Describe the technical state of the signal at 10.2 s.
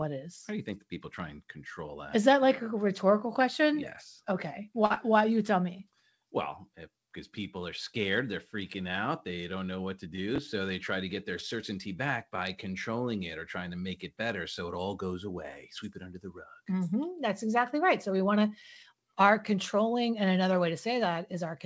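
At 10.2 s the speech hits a short stall from a late packet. It runs from 10.16 to 10.20 s. A packet arrived after it was due, so the jitter buffer ran dry. The receiver held the last sound for about 21 ms, then resumed from the same point. Nothing is lost, but playback ends up 21 ms later. The held sound is briefly stretched, with a faint buzz or dip. The call path's 8 kHz ceiling, which fits G.722 at 64 kbps, is in place.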